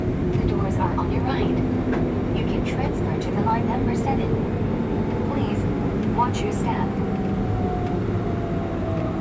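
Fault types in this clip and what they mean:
Nothing stood out on listening to this recording.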